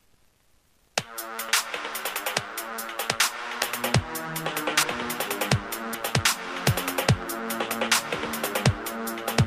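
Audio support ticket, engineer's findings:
Jump ahead in the sound at 1.49 s and 4.83 s. No gap. Roughly 0.3 s and 0.1 s skipped. Likely a dropped buffer (overrun): capture data overwritten before the program read it.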